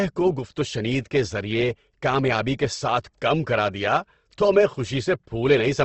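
A speech recording carrying plainly audible codec damage from start to finish, most likely Opus compression at a low rate, one that fits roughly 16 kbps. Nothing remains above about 8.2 kHz, so the top is cut to a wideband limit, and the band below it sounds grainy and rough, with a noisy texture where fine detail should be. That graininess separates it from MP3, whose starved bands drop out and leave a swirling, watery sound.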